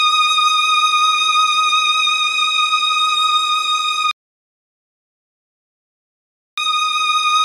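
A rebuffering stall hits at 4.11 s: the audio drops to silence until 6.58 s, then picks up exactly where it stopped. The player ran dry of downloaded data and waited for more, so nothing's missing, but about 2.46 s of dead air gets added.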